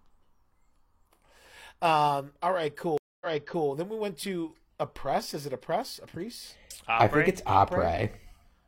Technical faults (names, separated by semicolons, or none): stream reconnect